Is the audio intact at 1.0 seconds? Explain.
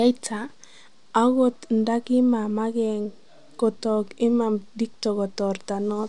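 Yes, at 1.0 seconds the speech plays through intact, with no dropout, click, distortion or other audible fault at that moment.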